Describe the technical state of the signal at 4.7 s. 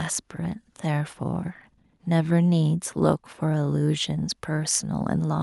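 At 4.7 s the speech signal is intact, with no audible fault at that moment.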